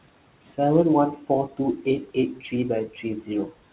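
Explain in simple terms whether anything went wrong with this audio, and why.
Yes, a noise suppressor is at work, and it causes two problems. Throughout the clip there are noise suppressor artifacts. The room noise is pushed down between words and swells back under them. There is also speech cut by the noise suppressor, from 2.34 to 2.53 s and from 2.87 to 3.05 s. The suppressor mistook quiet parts of the speech for noise and turned them down, so those bits sound swallowed and faint. The narrow, phone-like tone comes from the call connection, and the background noise is real room noise.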